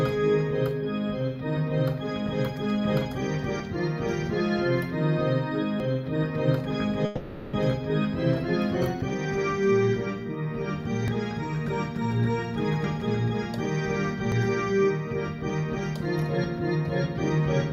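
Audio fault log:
3.6 s, 5.8 s, 11.08 s, 12.84 s and 14.32 s, dropped buffer (overrun): each is an abrupt skip where the sound jumps forward with no gap, skipping roughly 40 ms, or about a tenth of a second at 12.84 s. The likely cause is samples overwritten before the program read them, so the two sides are butted together. Unlike a network dropout, nothing is held or faded and there is no pause, only an instant splice.
7.05 to 7.55 s, long network dropout: for about half a second the sound is replaced by a smeared continuation of what came just before, a buzzy tail that decays over nearly the whole 0.48 s. It never reaches full silence, and then the sound resumes further on with that stretch missing. The likely cause is audio failing to arrive. It differs from the overruns by lasting far longer and by the fading fill, not a clean splice.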